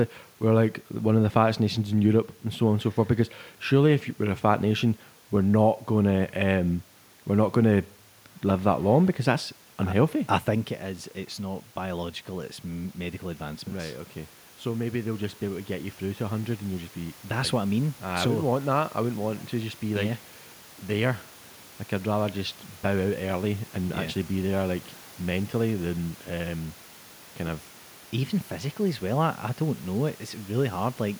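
A speech recording with automatic gain rising from 14.64 to 17.24 s: the gain control decided the input was too quiet and crept up about 4 dB, lifting voice and room noise together. The level shift around 10 s is just the talker moving.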